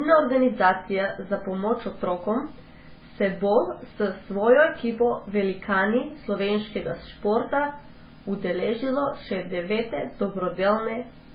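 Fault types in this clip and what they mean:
Transcoding between lossy codecs: the speech carries two layers of coding damage at once, throughout. A hard ceiling at 5 kHz fits a very low-rate MP3 stage near 16 kbit/s. Over that sit the different artefacts of a later HE-AAC encode that likely spent its bits preserving those earlier artefacts. A single low-bitrate codec would leave one consistent flavour of damage, not two overlapping ones.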